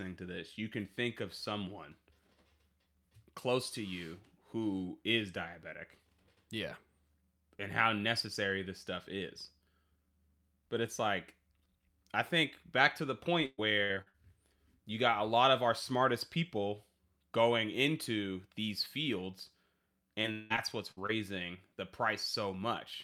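From 13.45 to 14.16 s there is repeated packet loss, with a robotic sound. Audio drops out in several holes, the longest 122 ms. Each is patched by stretching the last sound. From 20.22 to 21.11 s it returns, with gaps up to 185 ms.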